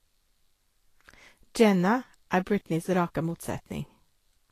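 Speech, likely passed through low-bitrate Vorbis compression throughout, consistent with roughly 36 kbps: treble is coarsely quantised into grainy hiss, attacks blur, and nothing remains above 14.2 kHz.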